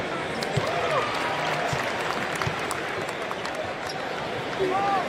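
At about 1.75 s there's a tiny skip where an overlap between stream segments trimmed a few milliseconds, so the waveform jumps at that segment join.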